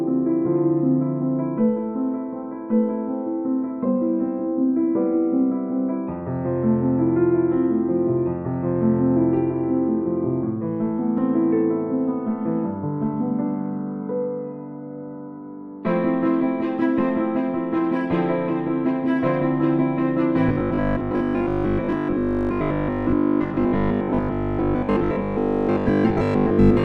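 At 11.18 s a small jump ahead marks a dropped buffer (overrun), likely a tiny sliver lost to overwriting, with no silence, unlike a gap. From 20.49 s to the end the sound turns into a rigid 50 Hz buzz, robotic sound from repeated short buffers. It is likely a 20 ms stretch looped over most of the time, and unlike dropouts it buzzes continuously.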